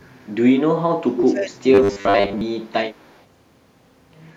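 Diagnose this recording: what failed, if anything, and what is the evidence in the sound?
Echo leak, at the call-processing stage, appears from 0.00 to 0.32 s and again from 2.92 to 3.24 s as a faint copy of the speech trailing it by about 187 ms, at about 35 dB below the direct signal. The echo canceller at a loudspeaker end likely let residual pickup through. On a spectrogram, the speech formant pattern repeats, shifted right by 187 ms and much dimmer. In the waveform, low-level wiggles continue where the direct speech has decayed.

Speech suppressed in double talk, also a call-processing fault, runs from 1.07 to 2.86 s. The speech repeatedly ducks and breaks up, in total across roughly one and a half seconds, dropping by as much as about 25 dB at its deepest. With both ends active, the echo suppressor likely mistook local speech for echo and attenuated it. The waveform envelope shows sudden notches and collapses, and the spectrogram shows energy fading across the band, with the upper frequencies thinning.

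Robotic sound from repeated short buffers, at the driver or buffer stage, occupies 1.74 to 2.41 s, overlapping the suppression. The speech becomes a rigid metallic buzz pitched at 100 Hz, which fits a 10 ms buffer being replayed while fresh audio is skipped. Most of that span is repeated material. It is likely buffer underrun concealment. The spectrogram shows evenly spaced harmonics at multiples of 100 Hz. The waveform shows an identical short segment tiling periodically.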